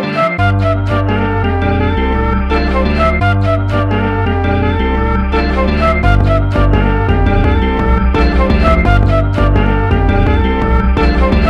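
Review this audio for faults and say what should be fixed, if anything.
Nothing here needs fixing, as the signal shows no technical faults at any point.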